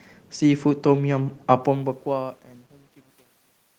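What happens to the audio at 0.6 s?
At 0.6 s the speech is intact, with no dropout, click, distortion or level change.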